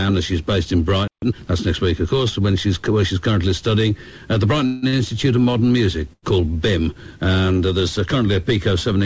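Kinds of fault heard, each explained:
Playback stall: At 1.08 s the sound cuts out mid-flow and stays silent for about 0.15 s, until 1.22 s. The likely cause is the player running short of data or its thread being blocked.
Time-compressed catch-up: Right after the stall, from 1.22 to 1.36 s, the audio runs at twice normal speed while holding its pitch. Small pieces are cut and cross-faded to shed the backlog. This gives a brief hurried passage.
Call audio freeze: From 4.66 to 4.84 s the last sound is carried on as a fading buzz or hiss for about 164 ms, never reaching silence. Packets were likely held up in transit, emptying the jitter buffer. The audio then continues from the same point, so nothing is lost.
Short stall from a late packet: At 4.88 s a sound is held about 46 ms too long. At 6.13 s another is stretched for about 95 ms. Each time a packet arrived late and the receiver extended the last sound. 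The stretch is heard as a slight buzz or dip before the audio picks up again.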